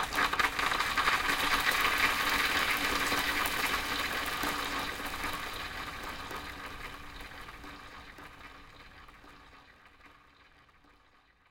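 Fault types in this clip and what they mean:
Block size mismatch (truncated): one stage hands over longer blocks than the next one reads, so the tail of every block gets chopped off before it's played. Throughout the clip that shows up as a steady buzz at about 92 Hz, the block rate, with blocks of 512 samples being written. Because a slice of each block is lost, the sound runs about 1.07 times fast while staying at roughly its normal pitch.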